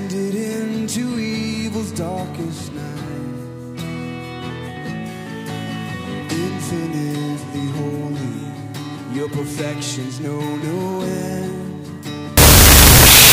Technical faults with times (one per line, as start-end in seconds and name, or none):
12.37-13.33 wrong sample width